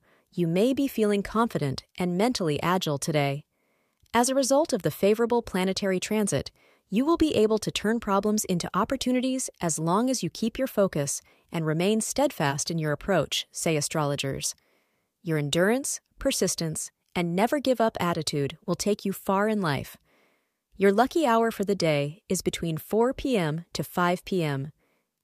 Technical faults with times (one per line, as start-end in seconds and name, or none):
none